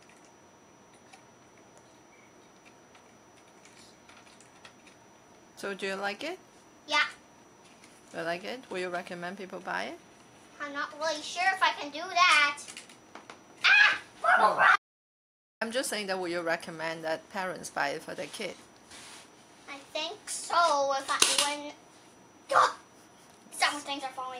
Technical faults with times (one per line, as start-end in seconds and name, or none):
14.76-15.61 audio dropout to silence